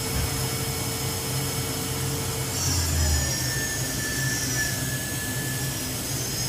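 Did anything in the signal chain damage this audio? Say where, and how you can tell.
No, nothing audible in the signal chain has damaged this audio; its level, continuity and frequency balance stay intact and consistent throughout.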